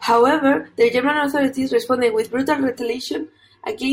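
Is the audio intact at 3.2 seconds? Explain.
No. From 2.79 s, just after "authorities responded with brutal", to the end of the clip at 3.92 s, the sound turns hollow and phasey, with a thin, boxy colour. This is channel delay (comb filtering). One channel runs roughly 3 ms behind the other, and when the two are summed to mono, their shared content cancels at evenly spaced frequencies. The first deep notch sits around 150 Hz, and further fixed notches follow up the spectrum.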